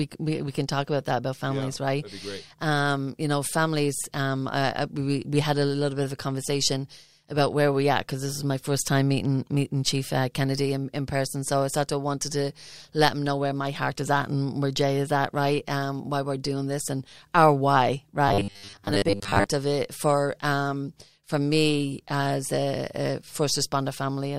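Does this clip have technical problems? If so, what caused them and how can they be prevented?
Yes. Robotic sound from repeated short buffers, 18.28 to 19.46 s: a rigid 100 Hz buzz, likely from 10 ms segments being repeated while most real audio was skipped. Larger buffers or more processing headroom, so that new audio always arrives in time, would prevent it.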